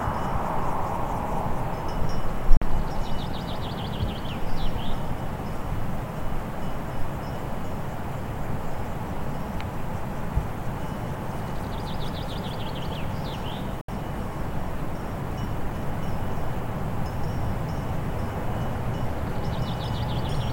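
At 2.57 s the sound cuts out for about 46 ms, until 2.62 s, and again at 13.81 s for about 70 ms, until 13.89 s. Each is a Bluetooth dropout, likely from audio packets reaching the headphones too late and being discarded. The lengths fit two and then three lost packets. Playback resumes further along, as though the audio kept running underneath. On a waveform each gap is a flat line, and on a spectrogram it is an empty vertical band across all frequencies.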